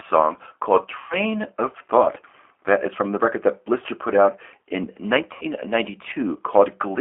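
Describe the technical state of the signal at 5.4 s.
At 5.4 s, VoIP packet loss concealed by the speech codec runs from 5.33 to 5.46 s, just after "put out in". About 80 ms of signal goes missing, which fits four lost 20 ms packets. Rather than a silent gap, the decoder stretches its last pitch and filter into a buzzy tone or coloured noise that fades, and the sound stays weak for a moment after packets resume. The G.729 codec is also present at this point. Its 8 kbit/s frame-based rebuild of the speech gives a slightly rough, synthetic quality, and the 300 Hz to 3.4 kHz line band leaves nothing above 3.4 kHz. Unlike a simple low-pass filter, this coding roughness is audible within the band.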